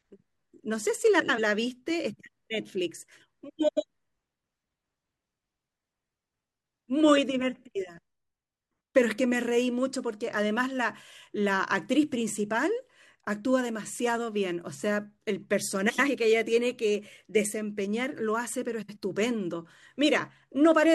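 Four short stretches of this speech have frames out of order: 1.19 to 1.39 s, 3.68 to 3.84 s, 15.89 to 16.09 s and 18.82 to 18.97 s. In each, two neighbouring blocks got swapped and decoded as they arrived. They're about 93 ms each in the first three (which fits runs of four frames) and about 70 ms in the last. You hear a quick garbled flutter, but nothing goes missing.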